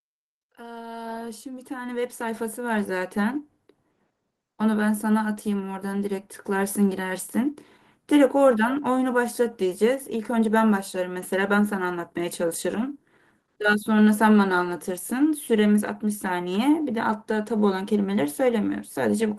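Automatic gain rising runs from 0.56 to 3.45 s. The gain control judged the input too quiet and pushed its level up by about 14 dB over nearly three seconds, so the speech and the background noise swell louder together in one slow, steady climb.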